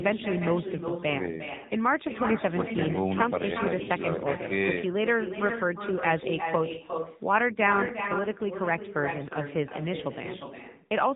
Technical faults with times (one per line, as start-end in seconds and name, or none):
0.00-11.15 echo with no canceller
0.00-11.15 AMR narrowband mobile codec